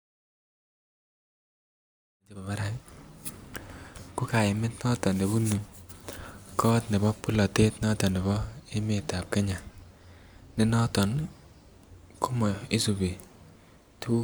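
Nothing stood out on listening to this speech; the gentle fade-in that starts around two seconds and reaches full level by 2.78 s is an ordinary edit.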